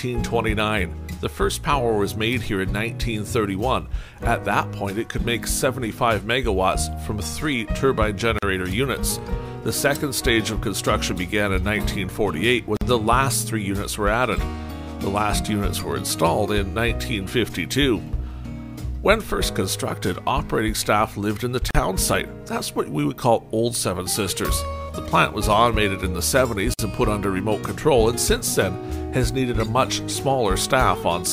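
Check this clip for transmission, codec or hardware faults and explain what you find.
Four brief dropouts interrupt the sound, each a gap at a join of encoded pieces.

At 8.39–8.43 s (40 ms), 12.77–12.81 s (46 ms), 21.71–21.75 s (41 ms) and 26.74–26.79 s (52 ms), a silence with smeared edges cuts in before the sound resumes where it stopped. Separately encoded pieces were joined with each run's start-up delay and padding left untrimmed.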